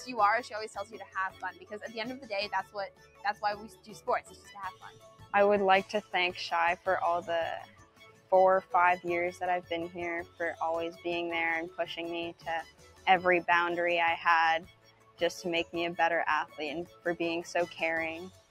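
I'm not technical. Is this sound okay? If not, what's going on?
No. A noise suppressor built for speech was left running on this audio, so it treats steady, lingering sound as noise. Sudden hits still come through, but held sounds and tails sink, giving a pumping, thinned feel. Unlike a simple volume fade, the sharp starts mostly come through.

Sound cut by the noise suppressor shows up at 0.81–5.33 s, 7.61–8.74 s, 9.34–9.71 s, 10.24–11.05 s, 11.7–13.07 s, 14.6–15.74 s, 16.46–17.06 s and 17.68 s to the end. The sound ducks there rather than going fully silent as in a dropout.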